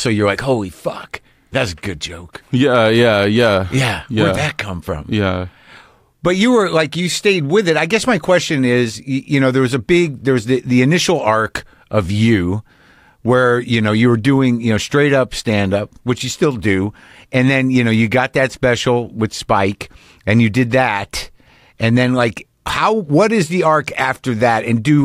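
No technical faults can be heard anywhere in the speech.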